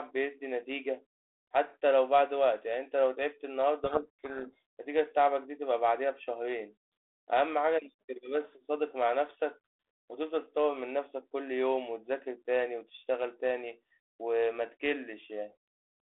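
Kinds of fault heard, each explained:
Codec payload misread: from 3.84 to 4.62 s the receiver unpacks the G.726 code words with their bits in the wrong order, so each 4-bit difference value of the 32 kbit/s stream decodes as the wrong step and throws the adaptive predictor off course. The speech sinks under harsh, rasping distortion. On a spectrogram the band up to about 3.5 kHz fills with dense, smeared energy, and the waveform turns jagged and noise-like.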